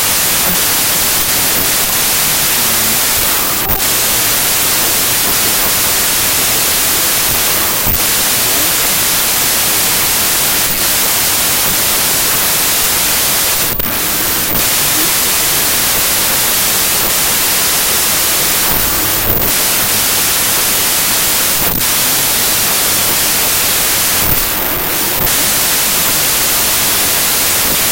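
From start to end, a wrong sample width fault: audio stored as packed 24-bit samples appears read as 16-bit, so many values are built from mismatched bytes. Speech sits buried under loud broadband hiss, slowed to 0.667 speed with lowered pitch. The waveform looks like a dense noise block, and the spectrogram shows dense noise over faint harmonics.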